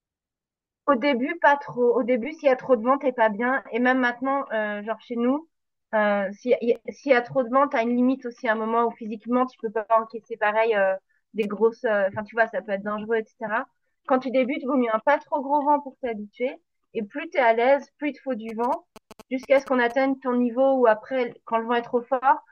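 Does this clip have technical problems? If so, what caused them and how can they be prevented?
Yes. The clip has two kinds of fault: repeated buffers and GSM signalling bursts.

Repeated buffer: At 6.76 s a chunk of about 5 ms plays twice, and from 11.43 to 11.45 s a chunk of the same length plays five times in a row. No audio is lost, but each hard join produces a click, and the run at 11.43 s becomes a brief buzz near 200 Hz. In the waveform, identical 5 ms segments sit side by side with a step at each seam. A spectrogram shows thin vertical lines, with a short harmonic smear at 11.43 s. Using a larger playback buffer and giving the audio thread higher scheduling priority would prevent this.

GSM signalling bursts: From 18.49 to 19.92 s there is a galloping dit-dit-dit of short buzzes, about 20 dB below the speech. A nearby 2G phone is exchanging signalling with its network, and the audio circuit rectifies its radio bursts at their 217 Hz rate. 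A spectrogram shows an interrupted comb of lines at 217 Hz and its multiples, reaching well into the kHz range. The waveform shows clustered rectangular pulses. Keeping phones away from the recording chain, or switching them to airplane mode, would prevent this.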